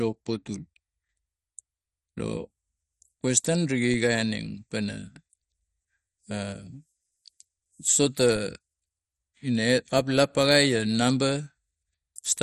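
Speech runs throughout with a dull, gurgling, granular texture and nothing above 15.1 kHz. Upper bands flicker away. This is likely heavy MP2 compression, and the damage fits a low bitrate near 56 kbps. DC steps at 3.94 s and 8.36 s each land as a low thump. The zero line jumps, then drains away as a 20 Hz high-pass would.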